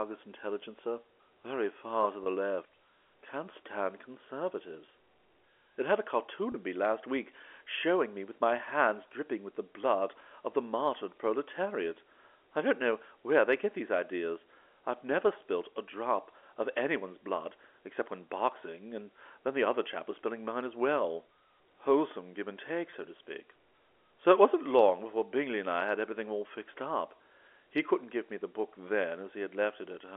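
Packet loss with pitch repetition occurs three times, from 2.24 to 2.26 s, 6.52 to 6.54 s and 22.90 to 22.92 s, each gap 20 ms long, which fits a single lost packet. The receiver filled each hole by replaying the last pitch period of the speech, so each spot carries a brief held, slightly buzzy tone before the voice resumes. This sits within the narrow 300 to 3400 Hz telephone band of the G.711 A-law line.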